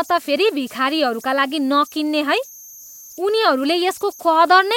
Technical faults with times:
0.00-4.76 converter idle tones

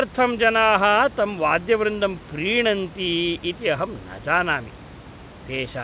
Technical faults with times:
none

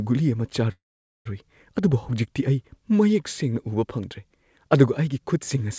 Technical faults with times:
0.72-1.27 call audio freeze

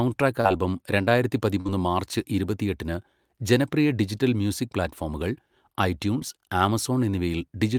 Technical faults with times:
0.41-0.47 short concealed packet loss
1.61-1.67 short concealed packet loss
6.19-6.22 short concealed packet loss

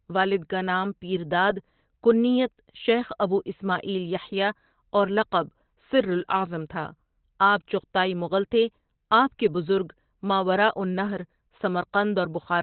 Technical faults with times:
0.00-12.62 Opus compression

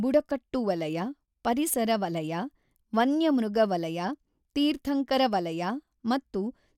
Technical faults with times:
none

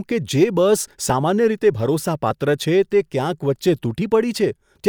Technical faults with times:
none

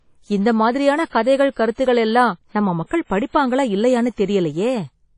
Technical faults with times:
0.00-5.18 WMA compression

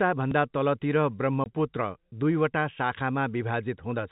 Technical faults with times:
1.44-1.46 packet loss filled with silence

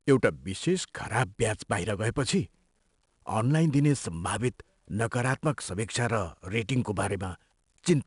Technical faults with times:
0.00-8.06 4-bit ADPCM compression

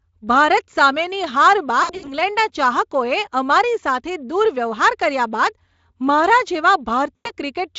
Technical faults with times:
1.83-2.14 VoIP packet loss concealed by the speech codec
7.15-7.31 VoIP packet loss concealed by the speech codec

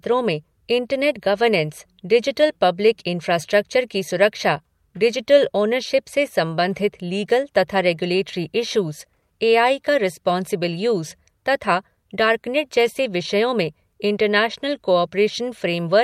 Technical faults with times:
none

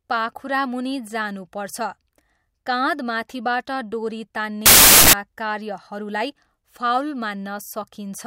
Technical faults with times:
4.66-5.13 samples built from the wrong bytes

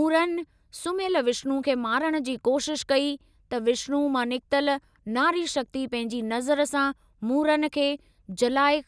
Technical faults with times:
none

